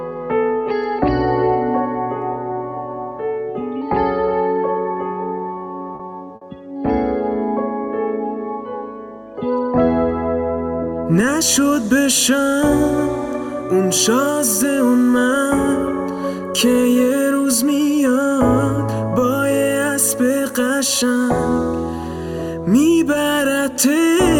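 At about 5.95 s there is a short stall from a late packet. A packet arrived after its playout time, the jitter buffer ran dry, and the receiver held the last sound for about 40 ms until the data came in. Playback then resumed exactly where it stopped, so nothing is lost, but everything after it runs about 40 ms later. It sounds like a brief drawn-out hold with a faint buzz. On a spectrogram the harmonics run flat and unchanging from 5.95 to 6.02 s, and the waveform shows a short stretch of repeated cycles.

At 6.35 s, less than half a second later, comes a burst of packet loss lasting until about 6.44 s. Here the data never arrived in time to be played. The receiver covered the gap by extending the last sound for about 60 ms and fading it down, then jumped ahead, so about 60 ms of the audio is gone. It is heard as a held buzz or hiss that dies away before the sound restarts slightly further on. 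A spectrogram shows smeared, steady bands thinning out toward 6.44 s, followed by an abrupt edge where the audio picks up again. In the waveform, the envelope decays in repeated cycles and then jumps discontinuously.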